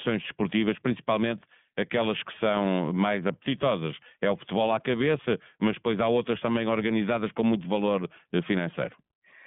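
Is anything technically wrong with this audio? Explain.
Yes. Throughout this speech, the iLBC codec is at work. The band runs only from about 150 Hz to 3.5 kHz, and plainly audible rough, synthetic texture points to 30 ms frames coded independently. That texture sets it apart from simple band-limiting, which would sound muffled but clean.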